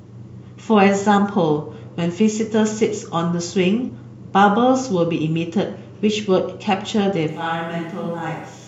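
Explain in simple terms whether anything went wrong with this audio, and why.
Compressed frames skipped at 2.04 s and from 3.88 to 3.90 s: tiny slices of the speech went missing, so it jumps forward.

Switch to a distant microphone from 7.29 s to the end: the speech suddenly drops in level and turns hollow and roomy with more background noise, likely because a faraway microphone took over.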